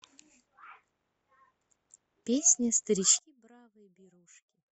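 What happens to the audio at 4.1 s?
At 4.1 s the speech has nearly vanished, sitting about 30 dB down from 3.19 s to the end. The likely cause is one channel inverted: with one side's polarity reversed, the centred material cancels when summed to mono, leaving only a faint residue.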